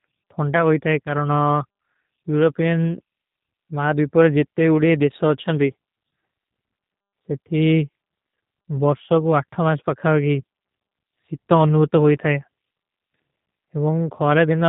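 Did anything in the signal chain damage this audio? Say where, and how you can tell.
Yes. G.729 codec damage runs through the whole clip, at the codec stage. Nothing above about 3.8 kHz survives, and the speech has a plainly audible rough, synthetic edge, which fits an 8 kbit/s G.729A encode. The codec does not send the waveform. It sends a vocal tract filter, a pitch predictor and a few pulses per 10 ms frame, and the decoder rebuilds speech from those, so the fine detail comes back approximated and slightly buzzy.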